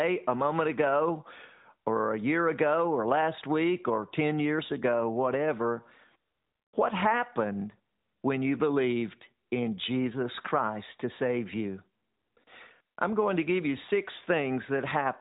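Nothing in this speech recording stands out as a technical fault, though it carries the narrowband sound of a mobile phone call, with nothing above about 4 kHz coming through.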